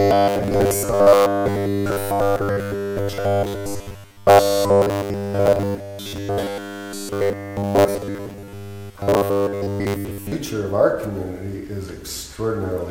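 Robotic sound from repeated short buffers runs from 0.01 to 10.32 s: a metallic 100 Hz buzz, likely from a 10 ms chunk replayed almost continuously.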